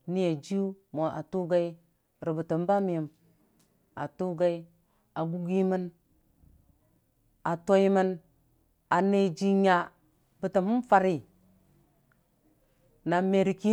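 Speech clip with a single bit error spike at 2.79 s: a sharp, broadband tick unrelated to the speech, peaking at about -36 dBFS. Two adjacent sample values jump by a power of two and snap straight back, the signature of a flipped bit in memory or on a digital link.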